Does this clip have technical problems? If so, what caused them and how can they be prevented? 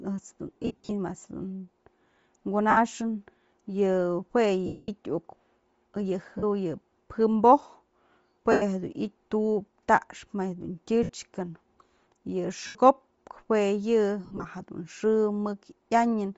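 Yes. The speech has a breathy, grainy edge with a hazy, noise-like top end, likely from Bluetooth LC3 compression at a low rate, around 32 kbps with 7.5 ms frames, where much of the upper spectrum is zeroed and refilled with noise. Streaming at a higher LC3 bitrate would prevent this.

The sound turns into a noisy, smeared blur at 0.48–0.92 s (scattered dropouts), 2.70–2.77 s, 4.66–4.88 s, 6.38–6.44 s, 8.52–8.62 s, 11.03–11.10 s (just after "ma jedun"), 12.67–12.75 s and 14.25–14.45 s. These are lost LE Audio frames. The decoder repeated the last spectrum with scrambled signs for up to about 220 ms at a time. A stronger radio link, less interference and the receiver kept closer would prevent these losses.

A sharp tick at 9.97 s, just before "ma jedun", is a block of digital silence about 2.9 ms long, which fits a 128-sample buffer left unfilled in time. The abrupt cut to zero and back causes the click. 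A larger audio buffer or a less heavily loaded playback thread would prevent it.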